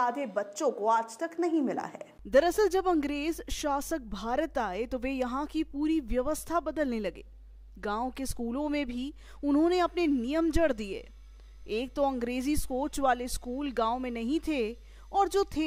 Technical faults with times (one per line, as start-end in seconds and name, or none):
none